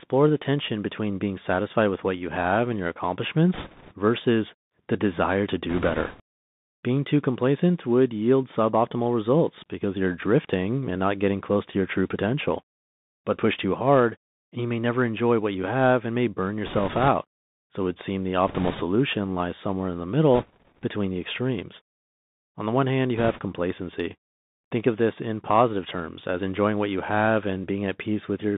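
Speech throughout sounds thin and muffled, with scratchy s sounds and a fine granular hiss beneath it. This is the Bluetooth CVSD headset codec, passing only about 150 Hz to 3.7 kHz, with one-bit slope tracking that fits a 64 kbps link. Brief rushing crackle bursts at 3.54–3.93 s, 5.69–6.21 s, 16.66–17.08 s, 18.48–18.83 s, 20.35–20.84 s and 23.17–23.40 s are bit errors on a Bluetooth voice link, with a few percent of bits flipped. Because each bit moves the signal only a small step, the errors produce crackly noise rather than sharp clicks.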